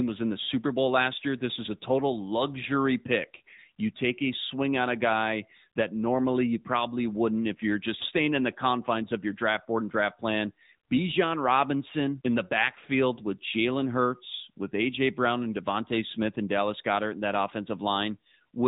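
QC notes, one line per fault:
Throughout, AMR narrowband mobile codec: band stops at 3.8 kHz; speech rebuilt from a pulse-driven vocal-tract model sounds plainly buzzy, fitting a 10.2 kbps mode.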